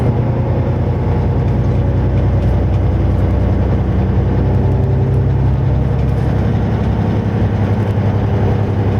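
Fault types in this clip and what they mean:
Gain pumping: the gain swings by about 5 dB throughout the clip. The effect is audible as loud and quiet parts pulled closer together and a flattened, squashed character. This is likely the result of input gain set too high, with a fast limiter or compressor clamping each peak.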